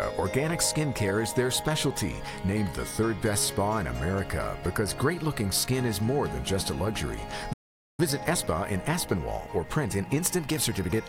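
The audio cuts out with a playback stall from 7.53 to 8.00 s, about 0.45 s of silence, most likely because the player's buffer ran dry or its thread got blocked. Right after, from 8.00 to 10.94 s, there's a time-compressed catch-up: the player trims its backlog by splicing out tiny chunks, so everything runs about 1.15 times fast at normal pitch.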